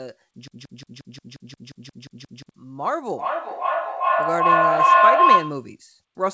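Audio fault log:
0.48–2.49 s, broken-record loop: the speech locks onto a single slice about 177 ms long and plays it back to back, 11 times, for roughly two seconds, with each pass identical. That exact, seamless repetition is the tell. Something in the chain, likely the player or the stream, stalled and kept re-sending the last chunk it had buffered, so whatever speech belonged in that window never arrives.
3.07–5.75 s, feedback howl: a tone around 1 kHz swells up underneath and keeps climbing until it's sitting about 11 dB above the speech, pulsing roughly every 0.4 s. That's a second device in the room on the same call. Sound goes out its speaker, back into a mic, and round again with a bit more gain each trip, so it narrows to the frequency the loop favours, throbs at the loop's round-trip time, and runs until it's cut.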